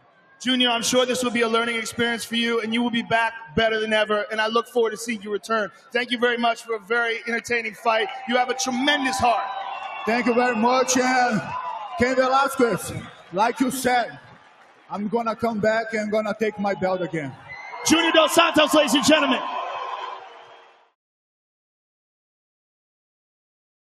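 A noise suppressor built for speech stays active throughout this sound. It treats steady and sustained material as noise, so the level swings by around 15 dB as its gain rises on attacks and falls on anything held or decaying. The result is pumping and thinning that follows how steady the sound is rather than how loud it is. That distinguishes it from a compressor, which reacts to level, and from a gate, which shuts fully.

The sound cut by the noise suppressor shows as specific dips. From 0.00 to 0.41 s the opening sinks by about 16 dB. At 3.39 to 3.57 s there is a shallow dip of about 7 dB. Between 4.63 and 7.85 s about a second in total is pulled down, by as much as about 15 dB. At 9.84 to 10.05 s a brief dip reaches about 5 dB. From 11.42 to 15.43 s roughly two seconds sink by up to about 17 dB. At 16.51 to 17.86 s the drop reaches about 14 dB. From 19.44 to 20.94 s most of the span falls by up to about 17 dB.

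In every case the sound thins and fades rather than cutting to silence, and onsets still come through. That separates these dips from dropouts.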